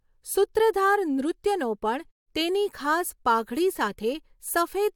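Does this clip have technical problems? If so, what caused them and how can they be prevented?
No technical problems are audible in this speech clip, so there is nothing to trace back to a cause or guard against.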